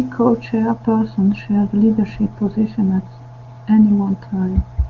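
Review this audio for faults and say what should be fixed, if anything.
Nothing here needs fixing: the speech comes through the AMR wideband (HD Voice) codec at its top rate of 23.85 kbit/s, and no fault turns up anywhere in it.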